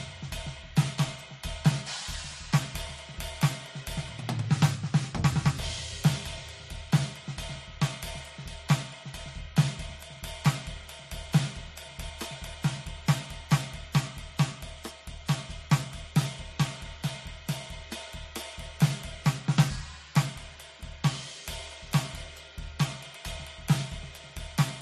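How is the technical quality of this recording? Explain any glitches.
The music is degraded throughout by stacked compression. Transcoding between lossy codecs runs the whole clip: nothing is heard above 13.2 kHz, and the artefacts of the different codecs are heard together, likely from a low-rate MP3 around 43 kbit/s re-encoded as AAC at 64 kbit/s.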